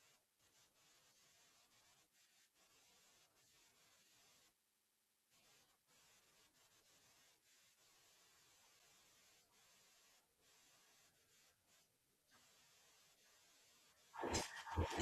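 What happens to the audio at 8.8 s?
At 8.79 s a block of digital silence, about 7 ms of zeros, cuts the speech abruptly without fade, giving a sharp tick rather than an audible hole or a softened dropout.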